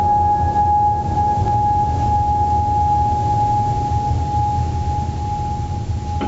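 From start to finish, the music shows gain pumping: the level drops on each loud passage and swells back in the quieter moments. The swing is roughly 10 dB, which narrows the gap between loud and soft parts and leaves the sound squashed. The likely cause is input gain set far too high, with a fast limiter or compressor repeatedly pulling it down. The call path's band limit also leaves nothing above 8 kHz.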